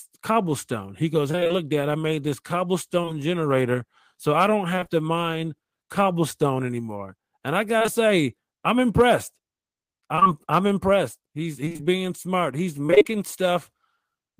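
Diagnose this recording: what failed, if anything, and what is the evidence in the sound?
The network path failed, showing repeated packet loss (robotic sound) in six bursts: 1.31–1.52 s, 4.75–4.91 s, 7.79–7.89 s, 10.15–10.27 s, 11.65–11.81 s and 12.87–13.06 s. About half of each burst is concealment, with gaps up to 24 ms. The decoder keeps extending the last sound into each hole, giving a choppy stutter.

Short concealed packet loss also comes from the network, at 3.02 s and again at 3.05 s, with about 20 ms lost each time. The receiver bridged each hole by continuing the preceding sound and then blending back into the real audio, which leaves two quick back-to-back smears.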